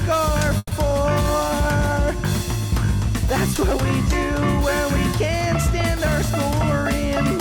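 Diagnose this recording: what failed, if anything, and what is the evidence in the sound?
A call audio freeze at the network stage runs from 0.57 to 0.73 s. The last sound is stretched into a fading buzz for about 140 ms, then about 20 ms of silence, before playback resumes intact but 140 ms late. This is likely delayed packets draining the jitter buffer. A spectrogram would show smeared, repeated harmonics decaying into a blank strip, and the waveform a shrinking periodic envelope.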